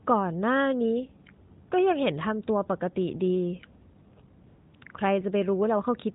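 AMR comfort noise replaces the background at 4.48–4.74 s, 4.76–4.82 s, 4.84 s, 4.88 s and 4.92 s. Speech frames stopped and synthetic hiss was substituted. On a spectrogram this shows as smooth, uniform gaps.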